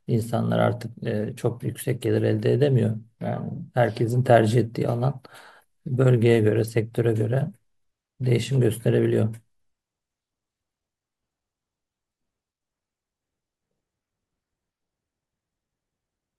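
A speech recording with no audible technical faults.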